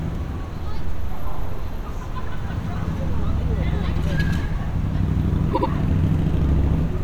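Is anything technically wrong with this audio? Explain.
Yes. Repeated frames occur from 5.53 to 5.68 s: a 78.4 ms block, consistent with a few compressed frames, was delivered again, so the decoder plays that slice two extra times. This produces an audible stutter and stretches the audio by about 157 ms.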